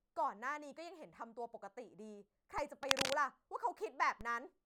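At 2.58 s a DC step occurs: the waveform's zero line jumps abruptly by about -38 dBFS, then drifts back as a 20 Hz high-pass bleeds it away. It sounds like a low thump under the speech, and a spectrogram shows a brief low-frequency smear. From 2.83 to 3.15 s comes cable scratch noise, likely a worn lead or connector being moved, adding dense, ragged crackle somewhat louder than the speech. A spectrogram shows broadband vertical flecks, and the waveform shows jagged spikes. At 4.21 s an identical DC step repeats the thump.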